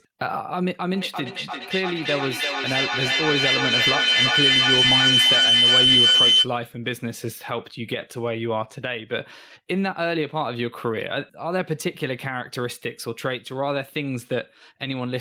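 A speech recording with feedback howl from 0.94 to 6.5 s. The microphone-to-loudspeaker loop gains level on each trip, so repeats grow, narrowing to a tone around 3 kHz, repeating roughly every 300 ms and peaking about 8 dB above the speech. A spectrogram shows a bright horizontal band near 3 kHz.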